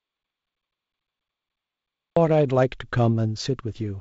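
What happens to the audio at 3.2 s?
Nothing goes wrong at 3.2 s: the speech carries on intact through that moment, heard through the wideband G.722 telephone coding that runs throughout.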